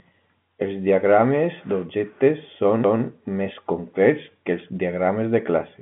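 At 2.84 s, just after "diagrames d'objectes", a tick and a brief mute interrupt the speech: a CD skip, the laser jumping to another spiral turn.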